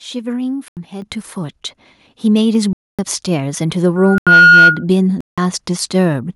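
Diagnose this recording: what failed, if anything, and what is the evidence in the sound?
Blocks of digital silence come from the driver or buffer stage. The audio drops abruptly to silence at 0.68 s for 85 ms, 2.73 s for 256 ms, 4.18 s for 85 ms, and 5.21 s for 171 ms. The 85 ms holes fit an unfilled 4096-sample output buffer.

At 1.02 s the microphone volume steps up by about 8 dB in a single jump, raising the speech and the background together. This points to call processing: automatic gain control judged the input too quiet and raised the device's input level in one move.

A loudspeaker feedback squeal runs from 3.96 s to 4.84 s, as a 1.4 kHz tone that builds over roughly 0.4 s to around 5 dB above the speech. The microphone is picking up its own loudspeaker, and at 1.4 kHz the loop gain exceeds unity, so that tone grows on its own. The 4.18 s dropout cuts into it.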